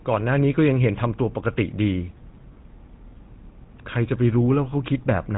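A speech recording carrying GSM full-rate codec damage from start to finish. Nothing survives above 3.9 kHz. The voice sounds buzzy and gravelly. The codec rebuilds it from a vocal-tract model driven by sparse, regular pulses. The coarseness points to a 13 kbps rate.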